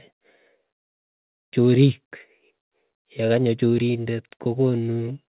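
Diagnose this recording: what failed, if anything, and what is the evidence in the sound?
Nothing failed; the call path carries it as expected.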